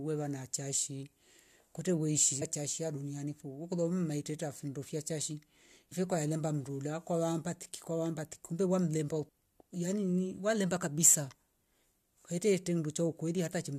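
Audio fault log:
2.41, 5.91, 9.28 and 13.45 to 13.47 s: damaged data in a compressed stream. Short glitches: the first right after "kwete weishi", the second just before "kwae mlemba". Corrupted bytes make the decoder misread frames, lose sync and search for the next frame header, briefly outputting garbage.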